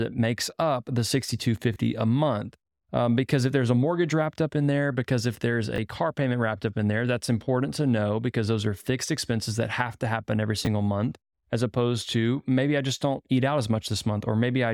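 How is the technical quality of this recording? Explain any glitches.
The recording has three brief playback glitches: two stutters from a repeated buffer and one jumbled moment from chunks out of order.

Repeated buffer, at 1.74 to 1.76 s and again at 5.76 to 5.78 s. Fresh audio failed to reach the output in time, so the device replayed the piece it had just played, once each time. That repeated piece is very short, which fits a 20 ms buffer, and around 20 ms of the real speech is lost at each spot. Because the repeat is so short, it comes across as a tiny click or buzz with a hard join rather than an obvious stutter.

Chunks out of order, at 10.65 to 10.67 s. A 10 ms chunk of speech arrived one chunk late, so it plays after the chunk that should have followed it. No audio goes missing, but the swapped order creates three hard joins in quick succession, heard as a fleeting garbled blip.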